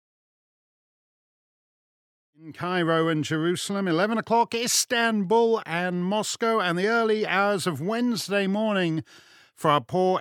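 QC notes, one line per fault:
No faults found; the level rises in a smooth editorial fade-in from roughly 2.5 s to 2.93 s, with no click or hard edge at the onset.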